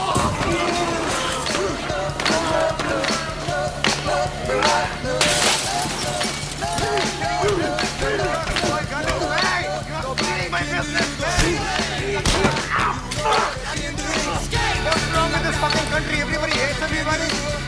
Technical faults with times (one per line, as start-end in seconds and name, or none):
none